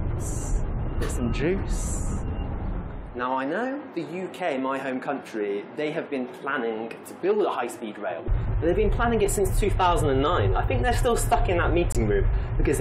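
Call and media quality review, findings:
Corrupt frame muted, 11.92–11.96 s: abrupt 40 ms dropout to silence, timing intact afterward. Probable component: decoder/player error concealment. Bit-damaged compressed frames rejected by decoder, replaced with silence; gap length fits two 20 ms frames.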